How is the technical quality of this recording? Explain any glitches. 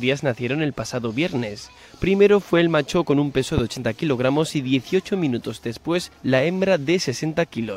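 One glitch stands out. A loud pop at 3.58 to 3.60 s is a single sharp transient, roughly 15 dB above the surrounding level. Its likely cause is a sudden voltage pulse from a switch, plug contact or static discharge, briefly shaped by downstream circuitry, while the underlying sound continues.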